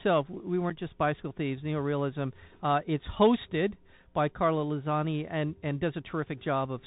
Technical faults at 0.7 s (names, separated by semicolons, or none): Bluetooth CVSD headset codec; unconcealed Bluetooth headset packet loss